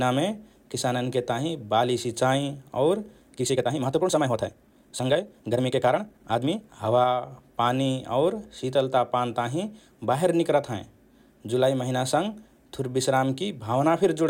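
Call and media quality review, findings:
Time-stretched section, 3.33–6.63 s: likely time-scale software compressing this span to 1.55x by dropping short segments while holding pitch. Symptom: abrupt jump to rushed pacing with unchanged pitch, then a sudden return to normal pace.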